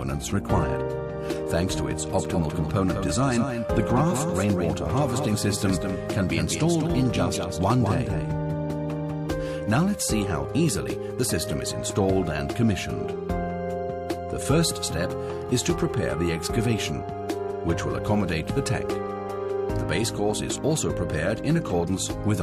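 Doubled audio track, from 2.18 s to 9.26 s: a second, full-band copy of the sound runs behind the original by around 200 ms and roughly 5 dB quieter, producing a distinct slapback repeat without any decay or room tone. Both edges are abrupt, with the copy cutting in and out cleanly. The likely cause is the same signal being picked up again over a slower route, or an edit leaving two misaligned copies stacked.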